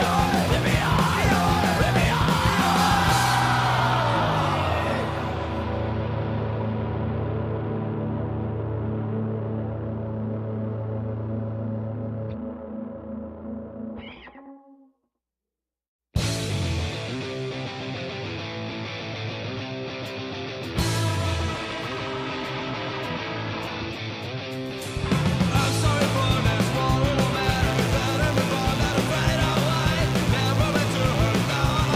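From 27.43 s to the end, switching spikes leak into the signal path, likely from a dimmer, a rectifier or a missing shield, firing twice in each cycle of a 60 Hz supply. This is mains buzz: the sharp edges pile up harmonics of 60 Hz that climb into the kilohertz range, so instead of a soft hum there is a steady, raspy buzz sitting roughly 15 dB below the sound itself.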